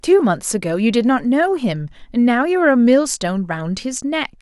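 No technical faults are audible anywhere in the recording.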